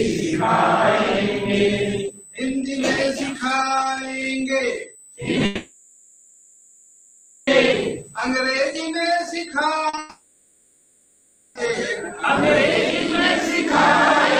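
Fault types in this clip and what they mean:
USB whine: A steady, fixed-pitch whine runs through the whole clip. It sits at 8 kHz and is strongest at its multiple, 16 kHz. It comes from the USB bus drawing current in regular 125-microsecond microframes, and that pulsing leaks into the audio through the power or ground. Its level is around 15 dB below the wanted sound, and it is heard as a thin, high tone.
Long network dropout: Two long gaps appear, from 5.45 to 7.49 s and from 9.99 to 11.57 s, lasting about 2.0 s and 1.6 s. In both, the receiver keeps extending the last sound as a synthetic buzz or hiss for the entire gap, with no drop to silence. Real audio then resumes further on, and the original content of those stretches is gone. The likely cause is that no packets arrived over the network for that long.
Short concealed packet loss: Two brief holes sit back to back, from 9.89 to 9.95 s (40 ms) and from 9.95 to 9.99 s (20 ms). 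Audio for those moments never reached the decoder in time. The receiver patched each hole by continuing the preceding sound, giving a short smear or wobble. These small losses lead straight into the second long dropout, so the fault begins as a blur before the longer fill takes over.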